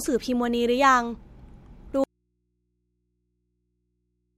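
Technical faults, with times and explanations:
2.04 s to the end: audio dropout to a faint residue. The speech cuts out abruptly mid-flow and never returns. It does not fade or pause naturally. The gap is not silent. A low mains hum remains, about 55 dB below the speech level. The signal was likely lost upstream while the input after the break stayed live. That open input then picks up only hum until the audio ends.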